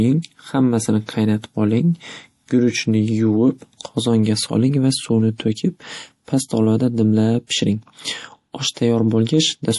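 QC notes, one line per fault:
Throughout: MP3 compression, plainly audible on this speech. Nothing reaches above about 11.5 kHz, the sign of an encoder cutting treble to save bits, and the damage level suggests a low rate such as 48 kbps. Weak frequency components drop in and out between frames, giving a watery, swirly texture with metallic chirps on s sounds and smeared attacks. A spectrogram shows a flat ceiling at 11.5 kHz and speckled, flickering high bands. Likely cause: low-bitrate MP3 encoding.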